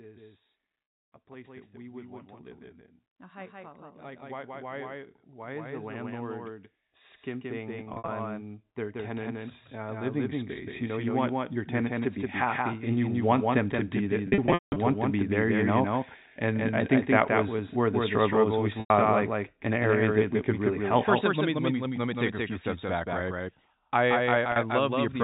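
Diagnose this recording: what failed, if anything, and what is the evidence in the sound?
A doubled audio track runs through the whole recording. A second full-band copy trails the original by about a fifth of a second, a few dB quieter, with no decay or room colouring. That dry, constant offset points to the call-processing or capture stage rather than acoustics. The likely cause is the signal being picked up twice through a slower second path, or two misaligned copies held in an edit.

Packet loss with pitch repetition occurs at the network stage at 0.84 s (100 ms), 7.84 to 8.08 s (120 ms lost in scattered runs up to 60 ms), 14.28 to 14.76 s (320 ms over 480 ms, longest run 180 ms), 18.80 s (100 ms, just before "like an area that") and 24.52 s (40 ms). The receiver's concealment repeats the last pitch period. Short gaps sound like a held, buzzy tone, and the longest run fades toward silence before audio cross-fades back in.

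Automatic gain rising, in call processing, appears twice. From 3.18 to 6.52 s, right after "want to live in", the level climbs by about 8 dB. From 7.26 to 13.31 s, ending just before "them to be that", it climbs by about 13 dB. In both, voice and background swell together over several seconds, consistent with the AGC judging the input too quiet and raising its gain gradually. The G.711 telephone coding on the path shows its 4 kHz band limit.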